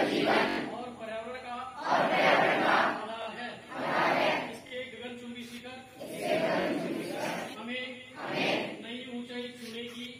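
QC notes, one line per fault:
0.49–0.58 s repeated buffer: one 21 ms piece plays four extra times, each with a hard join. New audio arrived late, so the last buffer replayed. The length fits a 1024-sample buffer.
3.22–3.26 s, 4.67–4.72 s, 6.61–6.66 s repeated buffer: the same stutter, with two extra plays each time. Little or no audio seems lost.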